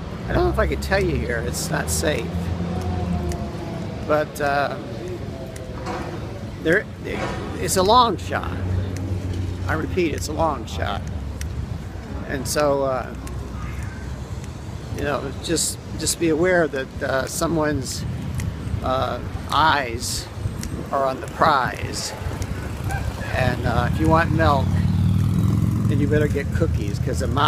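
A corrupt frame decoded at 1.26 s: flipped bits in a couple of compressed frames were played as if valid, so misread codes and gains scattered energy into the wrong frequencies, giving a brief, quiet chirp-like blip peaking around -30 dBFS.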